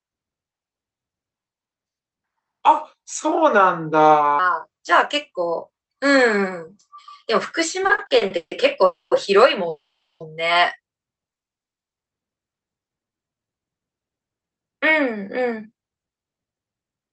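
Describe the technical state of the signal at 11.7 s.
At 11.7 s the audio sits inside a call audio freeze running from 11.32 to 11.98 s: about 0.64 s of plain silence, likely from delayed packets draining the jitter buffer. The sound then resumes where it stopped, with nothing lost and everything after it arriving 0.64 s late. A waveform shows a flat line there, and a spectrogram shows a blank vertical gap.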